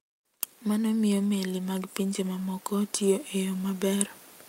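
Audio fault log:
0.25–4.16 s automatic gain rising: the gain control judged the input too quiet and slowly lifted its gain by about 9 dB, so speech and background swell together.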